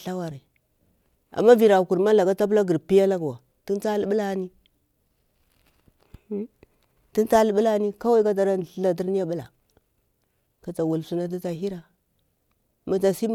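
No technical faults can be heard anywhere in this speech, so there is nothing to describe in time order.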